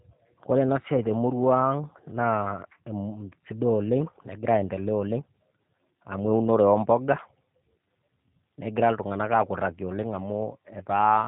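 From start to finish the speech has plainly audible G.729 codec damage: nothing above 4 kHz, and a rough, synthetic rebuild that fits 8 kbit/s.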